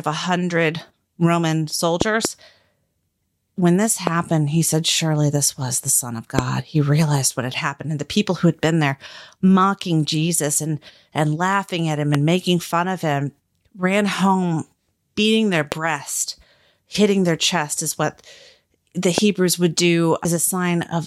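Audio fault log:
2.01–2.27 s, 4.07 s, 6.39 s, 12.15 s, 15.72 s, 19.18 s: loud pop. Sharp pops roughly 20 dB above the speech, with a quick double pop first and single ones after. The speech carries on beneath them. They are likely sudden voltage pulses from a plug, switch, static or driver glitch, added to the signal.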